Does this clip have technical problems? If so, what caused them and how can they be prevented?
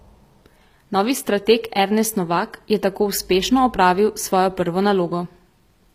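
Yes. Throughout, the treble in the speech sounds gritty and metallic and stops at 15.5 kHz. That's likely HE-AAC compression at roughly 24 kbps, with the top end rebuilt from copied lower bands. Encoding at a higher bitrate with plain AAC or Opus would prevent it.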